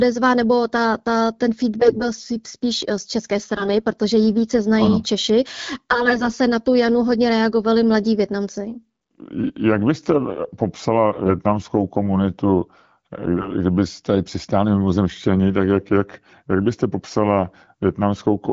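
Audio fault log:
1.80–2.03 s, 3.56–3.71 s, 5.91–6.36 s, 13.37–13.52 s: AMR bit errors. Flipped weakly protected bits misplace excitation pulses, so speech turns scratchy and gargly but keeps pitch and level, with no silent gaps.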